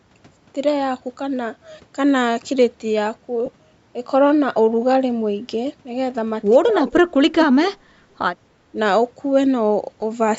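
At 3.46 s, lost LE Audio frames leave a brief gap of about 15 ms, consistent with two dropped frames. The LC3 decoder fills it with the previous spectrum under randomised signs, heard as a short noisy smear.

From 6.7 to 7.98 s, the speech drops sharply, by roughly 35 dB at its deepest, and is affected for about a second in total. This is likely speech suppressed in double talk: the echo canceller mistook the talker for loudspeaker echo and attenuated it. A much smaller dip of roughly 5 dB follows at 8.72 to 8.77 s.

A second burst of lost LE Audio frames at 10.00 to 10.02 s leaves another smeared 15 ms gap, again pointing to two concealed frames. The call microphone processing band-limits the audio, with nothing above 8 kHz.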